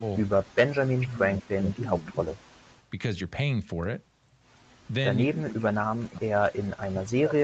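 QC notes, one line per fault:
0.00–0.06 s, 0.95–2.21 s and 5.25 s to the end: speech suppressed in double talk. The speech dips by about 15 dB, then about 30 dB, then about 40 dB, likely because the echo canceller muted this talker while the far side spoke.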